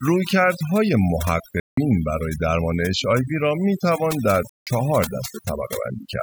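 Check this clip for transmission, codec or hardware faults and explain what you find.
Two faults are present in this speech clip: heavy processing throughout and two short dropouts.

Overdone noise removal runs through the whole clip. A noise reducer set far too aggressively pulls down any frequency band that sits near its noise estimate, so the background collapses to near silence dotted with twinkling specks, and the softer parts of the voice are stripped away with it. Unlike a codec artefact, this thinning follows the level of each band rather than time or bitrate, and it is strongest where the voice is quiet.

Bluetooth dropouts occur from 1.60 to 1.78 s and from 4.49 to 4.67 s, each a silent hole of about 174 ms. This is likely due to audio packets failing to reach the headphones in time, and a gap of that length fits the loss of roughly a dozen consecutive packets. Speech resumes further along, as though it kept playing underneath. 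That continuation is what separates these gaps from a buffer underrun or a stall, where the sound would pick up exactly where it stopped.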